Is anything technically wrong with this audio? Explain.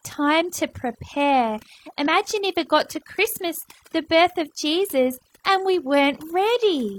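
Yes. Throughout the speech, overdone noise removal is audible: a noise reducer set far too aggressively has pulled individual frequency bands down or out wherever they sat near its noise estimate, taking quiet parts of the voice with them. The result is a near-silent background with twinkling specks; a spectrogram shows a dark floor scattered with isolated bright dots.

Between about 2.03 and 2.07 s, after "time to prepare" and before "if it got to", there is damaged data in a compressed stream. Corrupted bytes made the decoder misread frames and lose sync while it hunted for the next header, producing a brief glitch, seen as a short discontinuity or burst in the waveform.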